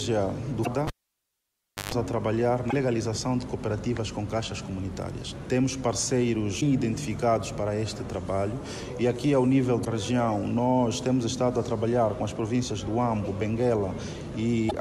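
Damaged data in a compressed stream shows up five times, at 0.62, 2.68, 6.57, 9.81 and 14.67 s. Each is a brief glitch lasting about 0.06 s. Corrupted or missing bytes make the decoder misread its frames, lose sync and hunt for the next valid frame header, dropping a slice of audio as it goes. A cable pulled and plugged in occupies 0.87 to 1.92 s. A pop cuts the sound to near silence for about 1.0 s, then a 127 ms burst of 50 Hz mains buzz comes through while only the plug's tip makes contact, and a second pop marks the return of the audio once the connector seats fully.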